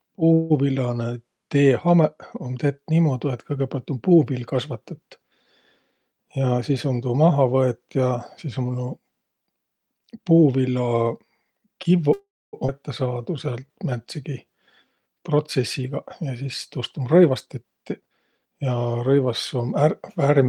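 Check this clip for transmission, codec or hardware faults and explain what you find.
The speech in the clip has four kinds of network-related fault: two call audio freezes, two jitter buffer speed-ups, one skip ahead and one jitter buffer slow-down. Most cluster around 12 to 19 s.

Call audio freeze, 0.33 to 0.52 s and 12.13 to 12.55 s. The likely cause is packets stalling in transit until the jitter buffer emptied, leaving the receiver to extend the last sound. The first freeze is a fading buzz or hiss of about 0.17 s with no silence. The second lasts about 0.4 s, and roughly 0.26 s of it decays to silence. Speech then resumes where it stopped, with nothing lost, only delayed.

Jitter buffer speed-up, 5.91 to 7.31 s and 15.22 to 18.70 s. The buffer had built up more delay than it wanted, so the receiver repeatedly cut out short pitch-period-sized slices to drain it. The first stretch plays at 112% speed, removing roughly 0.15 s. 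The second plays at 110% and removes about 0.4 s. Pitch stays unchanged, but the speech sounds rushed.

Skip ahead, 12.67 to 12.70 s. Just after the second freeze, a chunk of audio was dropped while later packets were already waiting, losing about 0.3 s of speech. Playback jumps forward across a gap of only about 12 ms, so the two sides are spliced almost directly. The effect is an abrupt lurch with part of the speech simply absent.

Jitter buffer slow-down, 13.07 to 15.15 s. To build up a reserve, the receiver repeated single pitch periods and fragments of pauses, adding about 0.22 s in total. Speech plays at 90% speed at normal pitch. Sounds come out drawn out, before the 15.22 s speed-up reverses the effect.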